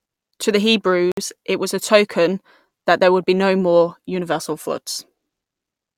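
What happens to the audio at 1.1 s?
At 1.12 s the speech drops to silence for about 57 ms, resuming at 1.17 s with "it was a token". This is likely a Bluetooth stall: delayed wireless packets let the headphone buffer run empty, so playback paused until retransmitted data arrived.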